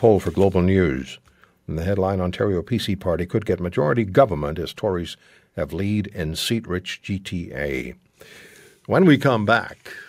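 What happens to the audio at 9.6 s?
At 9.57 s the speech and background suddenly drop about 4 dB, most likely a microphone volume stepped down as the call software lowered input gain in one step.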